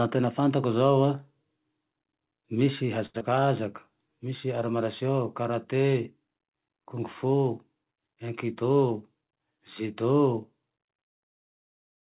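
A speech recording carried over a call path, band-limited with nothing above 4 kHz, which fits a narrowband telephone codec such as G.711 at 64 kbps. From 3.06 to 3.16 s a sound is held unnaturally long, about 82 ms, with a faint buzzy drag. This is a short stall from a late packet: the jitter buffer ran dry, so the receiver stretched the last audio until the packet arrived and then resumed without losing anything. Right after, from 3.18 to 3.23 s, there is a brief smear where about 60 ms of audio is missing and only about 23 ms of filler replaces it, so the sound jumps ahead slightly. This is short concealed packet loss: the receiver extended the preceding sound to cover the gap and dropped the rest, pulling the delay back by roughly 40 ms. From 8.62 to 9.45 s the speech runs hurried, about 10% faster at unchanged pitch. This is a jitter buffer speed-up: with more audio queued than its target, the receiver trimmed short pitch-period slices repeatedly, removing roughly a tenth of a second in total.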